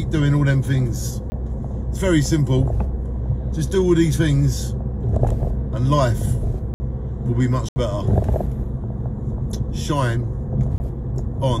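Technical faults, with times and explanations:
1.30–1.32 s, 6.74–6.80 s, 7.69–7.76 s, 10.78–10.80 s: block of digital silence. Each time, a run of samples goes silent. The sound cuts out and back with no fade. The 60 ms and 74 ms gaps sound like short holes.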